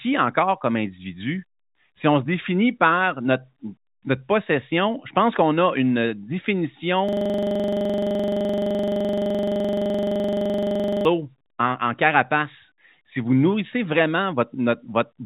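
At 7.09 s a system hang loop begins: the machine freezes while the hardware replays one 42.67 ms buffer, giving a machine-gun stutter at 23.4 Hz until 11.05 s.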